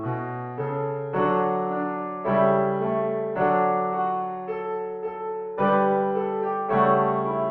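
Nothing technically wrong can be heard anywhere in this audio. There are no faults to time or trace to a cause.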